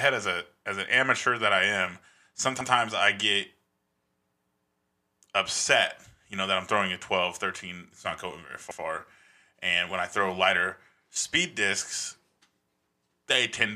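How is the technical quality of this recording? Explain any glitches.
A stutter interrupts the speech twice, at 2.61 to 2.71 s and again at 8.71 to 8.81 s, where a 100 ms slice plays a second time. These are overlapping chunks. The audio was handled in blocks about 6 s long, and each new block began before the previous one finished. Each join therefore repeats the last 100 ms, and the two joins fall about 6.1 s apart.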